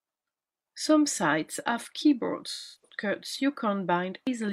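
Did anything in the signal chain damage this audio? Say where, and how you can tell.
Yes, codec stage: AAC frame loss with concealment at 2.52–2.96 s. The decoder smears the last good spectrum across roughly 0.3 s of missing frames.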